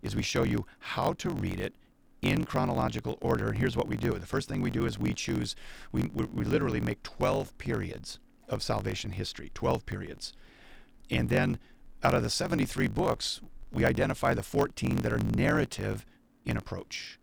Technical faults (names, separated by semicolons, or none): block size mismatch (truncated)